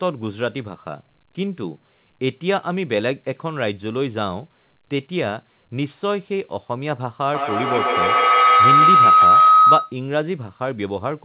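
Speech heard through a narrowband call path, with nothing above 4 kHz, which fits a G.711 A-law telephone codec. From 7.33 to 10.03 s a feedback howl builds. It settles near 1.5 kHz, peaks about 9 dB above the speech, and the loop delay is roughly 150 ms. A microphone is picking up a loudspeaker on the same call, and each trip round the loop adds level.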